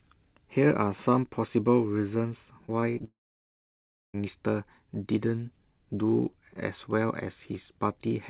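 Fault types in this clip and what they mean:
Repeated packet loss (robotic sound): From 2.66 to 3.05 s the sound breaks up into a choppy texture with pieces missing. Four short holes open in quick succession, none longer than about 21 ms, and each is covered by stretching the last fragment. Roughly a sixth of the stretch is patched this way. Unlike a single long dropout, the audio keeps returning between holes, so the effect is a stutter rather than a break.
Long network dropout: Straight after the choppy stretch, at 3.05 s, the sound stops and does not return until 4.16 s, a gap of about 1.1 s. A brief continuation of the last sound dies away, and then there is roughly a second of silence before the audio resumes, with the missing part simply gone. The likely cause is the network delivering nothing for over a second. This differs from repeated packet loss because it is one sustained gap, not a series of short patched holes. 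The narrow, telephone-like band, with nothing above 4 kHz, carries on either side of the gap.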